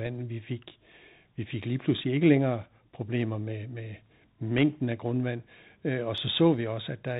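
Muffled, band-limited speech with scratchy sibilants, distortion on loud bright sounds and a granular hiss underneath, throughout: the Bluetooth CVSD headset codec, whose one-bit delta steps fit 64 kbps and cut everything above 4 kHz.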